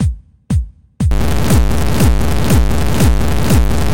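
From 1.11 s to the end, the sound turns harsh and buzzy in a way consistent with a stuck bit, likely a single data bit held at a fixed value, with steps near -10 dBFS. Unlike clipping, the grit also fills quiet moments with loud noise.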